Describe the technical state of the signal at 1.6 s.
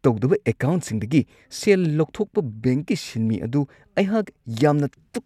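At 1.6 s the speech signal is intact, with no audible fault present at that moment.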